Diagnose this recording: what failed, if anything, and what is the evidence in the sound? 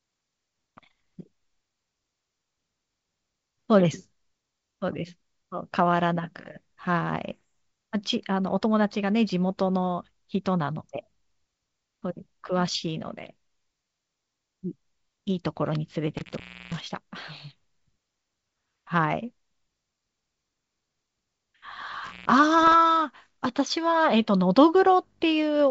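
Bit errors on an ADPCM link are audible in the G.722 wideband path, at the transmission stage. A rough pop lands at 7.28 to 7.31 s. A longer, harsher burst follows at 22.63 to 22.75 s. Each flipped bit knocks the decoder's predictor and step size off track, so the damage rings briefly with jumps in level. The second burst is denser, suggesting a higher error rate.

An intermittent contact in the analogue wiring cuts the signal twice. Between 16.17 and 16.94 s the line opens for 320 ms. Between 22.04 and 22.32 s it opens for about 140 ms. Crackle marks each break and return. Faint hiss fills the gaps while the circuit is open.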